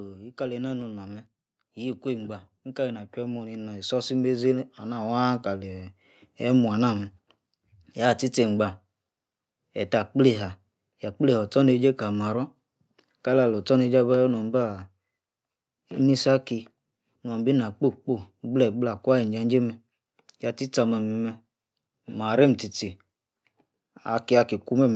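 Automatic gain rising runs from 0.35 to 6.68 s. The gain control judged the speech input too quiet and raised its level by about 13 dB, so voice and background swell together slowly, while the call microphone processing limits content to 8 kHz.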